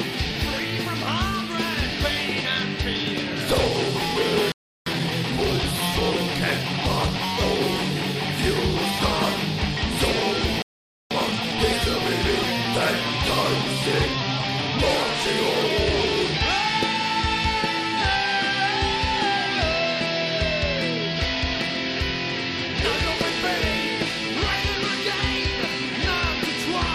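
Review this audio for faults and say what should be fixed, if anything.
The audio has two playback stalls: it drops to silence from 4.52 to 4.86 s (about 344 ms) and again from 10.62 to 11.11 s (about 487 ms), then resumes. Each gap most likely comes from the player's output buffer running dry, or from its audio thread being blocked, so nothing reached the output until data flowed again. Both gaps are long enough to hear as a clear break in the flow.

After each stall there is a time-compressed catch-up. From 4.86 to 7.14 s the audio runs at about 1.15 times normal speed. From 11.11 to 11.59 s it runs at about 2.0 times. Pitch stays unchanged in both, because the player is not resampling. It cuts out small segments and cross-fades across the joins to drain the backlog. That splicing produces a hurried feel.

To prevent this, enlarge the jitter or playout buffer and give the audio thread real-time priority so it cannot be starved. 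Limit catch-up to a gentle rate, well under 1.2 times, spread over a longer interval.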